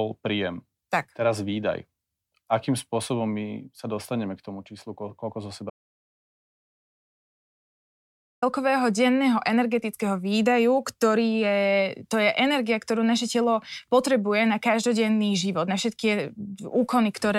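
At 5.70 s the speech just stops dead and there's an audio dropout to silence running until 8.42 s, picking up again on "denného energetického výdaju". That's about 2.72 s of silence, with no room tone or hiss underneath, so whatever was said in that stretch is simply gone. The likely cause is the input dropping out, say a loose connection or a momentary mute, while the recorder kept writing empty samples.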